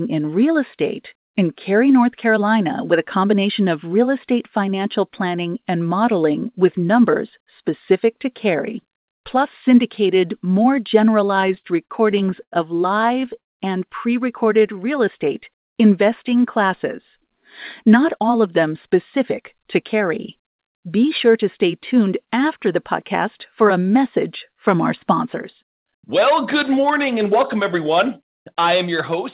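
Repeated stalls (stutter) occur from 11.36 to 12.54 s, just after "plus syndicated more", and again from 13.02 to 13.60 s, just before "and pre". Late packets emptied the jitter buffer, and the receiver stretched the last sound to cover each wait. The first stretch has twelve brief gaps of up to 90 ms. The second has seven gaps, the longest 183 ms. Nothing is lost, but the speech catches and drags.

A jitter buffer slow-down follows from 14.45 to 15.61 s, between "and pre" and "investing classes". Repeated pitch periods add 67 ms, so the speech runs at 95% speed at unchanged pitch.

A jitter buffer speed-up from 17.84 to 21.25 s trims roughly a fifth of a second of pitch periods, so the speech runs about 106% fast and sounds hurried. Throughout, the G.711 call path carries nothing above 4 kHz.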